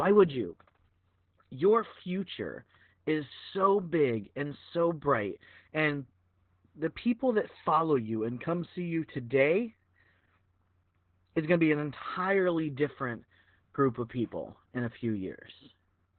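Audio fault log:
Throughout: Opus voice compression. The speech sounds muffled and boxy, like a narrowband phone line, with a hoarse, slightly robotic edge and heavy coding damage. Nothing is heard above about 4.2 kHz, so sibilants and consonant detail are gone. This fits Opus running its SILK linear-prediction coder at a very low bitrate, around 8 kbps, where the band is cut to narrowband and the excitation driving the voice model is coded coarsely.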